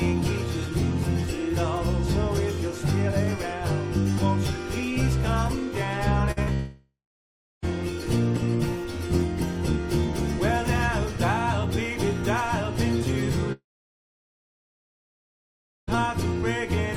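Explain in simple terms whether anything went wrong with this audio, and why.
Yes, several things went wrong, all from audio arriving late or not at all.

At 6.31 to 6.39 s there is a burst of packet loss. About 40 ms of sound was lost, and the receiver bridged the hole by stretching the last bit of sound and letting it fade before the audio picked up again.

At 6.43 to 6.49 s a short concealed packet loss follows. Another 40 ms failed to arrive, and the patch the receiver made up sounds like a quick smear or wobble before real audio returns.

The two longer breaks are long network dropouts. From 6.53 to 7.64 s about 1.1 s of audio is missing. The last sound trails off, then roughly two thirds of a second of silence follows. From 13.52 to 15.97 s about 2.4 s disappears, mostly as silence. In both cases the audio resumes further along, and the likely cause is the connection stalling.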